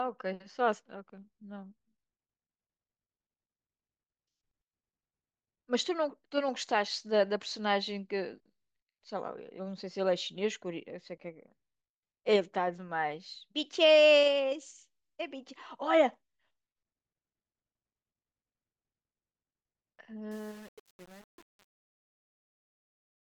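From 20.31 s to the end at 23.21 s, the speech fades out. But it shows truncation distortion on a fade. The gain stage drops low-order bits without dither, which points to only about 7 bits kept. As the level sinks, the waveform collapses into coarse square steps. The tail turns gritty and grainy.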